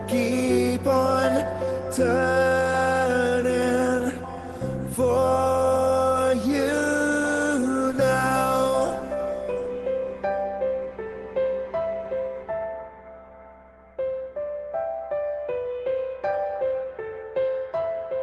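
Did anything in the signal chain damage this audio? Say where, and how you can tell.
No, nothing stood out on listening; the audio sounds like it came over a normal call path, with the top end stopping at about 12 kHz as expected for an Opus call link at a modest bitrate.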